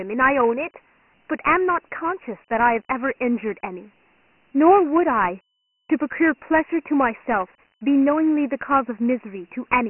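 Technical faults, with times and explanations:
Throughout, Dialogic VOX ADPCM: the speech sounds thin, boxed-in and dull, with nothing above 3 kHz, and a gritty, grainy hiss rides on every syllable and tracks the level of the voice. The heavy damage points to the 4-bit OKI-style adaptive coding at 6,000 samples a second, about 24 kbps. Coarse step sizes turn quantisation error into signal-following grit, and the low sample rate removes the top of the band.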